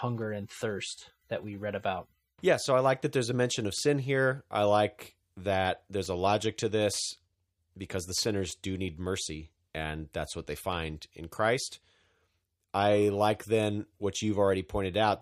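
Nothing stood out on listening to the speech in this recording.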